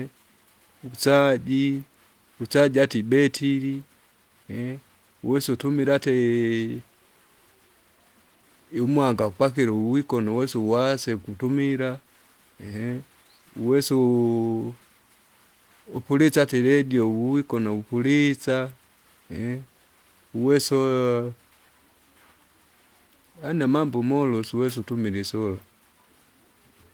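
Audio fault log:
Nothing stood out on listening; the Opus voice compression comes through as expected, with only light coding at what sounds like about 24 kbps in the hybrid mode and content reaching up to about 20.2 kHz.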